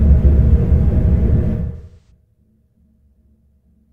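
From 1.76 to 2.10 s the sound turns smeared and washy for about 0.35 s, its detail blurred into a noisy patch. This is AAC frame loss with concealment: the decoder rebuilt missing audio from the last good spectrum, which fits about five lost frames.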